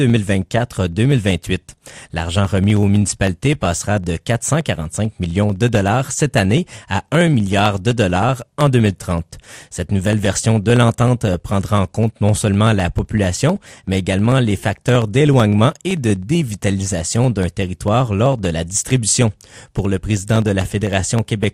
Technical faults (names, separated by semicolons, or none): MP2 compression